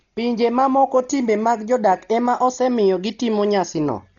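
Throughout, the speech sounds dull and muffled, with nothing above 7 kHz and a rough, fluttering noise around voiced tones. The likely cause is heavy Dolby Digital compression: starved of bits, the encoder narrowed the band and left many frequency lines empty, which the decoder filled with noise, fitting about 32 kbps.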